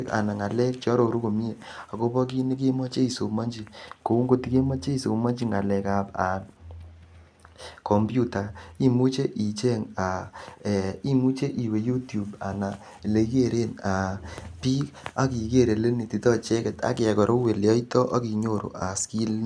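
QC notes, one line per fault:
No faults heard in this speech clip; no QC action needed.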